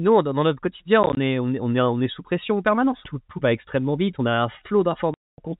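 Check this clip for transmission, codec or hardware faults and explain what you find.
Packet loss filled with silence occurs twice. From 1.03 to 1.17 s, just after "dans notre quotidien", short dropouts of up to 20 ms, about 60 ms in total, chop the speech. At 5.14 to 5.38 s there is a solid 240 ms hole. Lost packets, likely 10 ms each, were replaced with silence, leaving hard-edged gaps. The narrowband telephone coding passes through cleanly.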